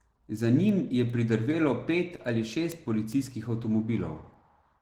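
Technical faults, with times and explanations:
Throughout, Opus voice compression: the speech sounds hoarse and faintly robotic, with plainly audible coding damage. This fits Opus in hybrid mode at around 16 kbps, where SILK codes the band below 8 kHz with coarse excitation and a thin CELT layer carries the top.
0.29 to 4.75 s, word clock ticks: about ten sharp ticks of uneven strength recur at a steady interval of roughly 0.4 s. Two unlocked digital clocks that disagree by something like 50 ppm slip past each other, and each slip drops or repeats one sample.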